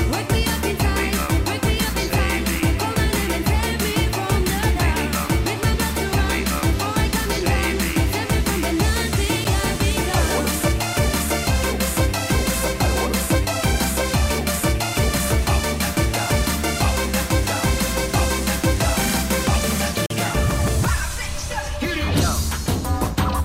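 Two blocks of digital silence: at 9.44 s a 7 ms dropout, short enough to register as a tick or dip, then from 20.06 to 20.10 s a 43 ms hole, which fits a 2048-sample buffer going out unfilled. Both times the sound cuts out and back abruptly.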